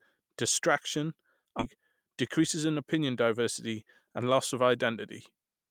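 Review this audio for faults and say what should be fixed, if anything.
At 1.59 s the speech lurches forward, with two parts of the utterance butted together and no pause between them. This is a skip ahead: roughly 0.7 s of audio never reached playback, most likely discarded when the jitter buffer overflowed with later audio already queued. The player dropped it to cut the delay and joined the two sides across 1.59 to 1.76 s. Sizing the jitter buffer to absorb bursts without overflow would prevent it.

From 2.22 to 2.96 s the speech sounds slightly rushed, running about 7 percent fast while the pitch stays unchanged. This is a jitter buffer speed-up. The buffer had built up more audio than its target, so the receiver trimmed short pitch-period slices again and again, removing roughly 50 ms in total to pull the delay back down. Smoothing how delayed packets are released into the buffer would avoid the catch-up.

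At 3.27 s there is a single sharp click, brief and isolated, with nothing audibly missing around it. The sound fits dropped samples: the waveform most likely jumps where about one sample was lost, a gap of only a few hundredths of a millisecond, which leaves a thin vertical line across the spectrum. Keeping the capture and playback buffers from underrunning, with correct sample-count handling at block boundaries, would stop these discontinuities.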